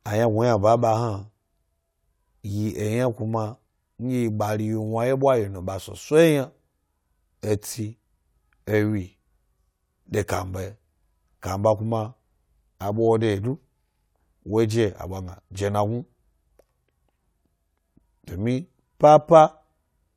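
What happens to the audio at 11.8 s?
At 11.8 s the speech carries straight through with no dropout, click, distortion or other fault, so the audio is intact at that moment.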